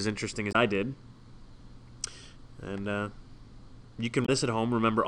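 Short glitches at 0.49 to 0.55 s and 4.22 to 4.29 s come from damaged data in the compressed stream, where the decoder misread corrupted frames and resynchronised.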